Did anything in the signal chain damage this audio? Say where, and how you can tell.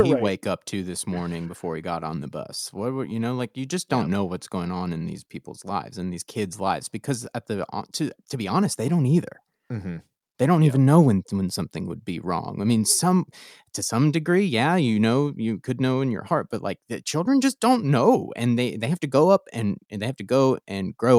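No, nothing in this speech shows signal-chain damage.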